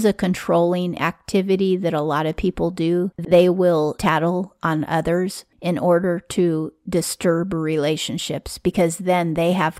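Right after "lot of people do", from about 3.18 to 3.32 s, there's a case of frames out of order: two neighbouring 64 ms chunks play swapped, giving a brief garbled flutter before "will tattle on others". Nothing goes missing; the chunks are just reordered.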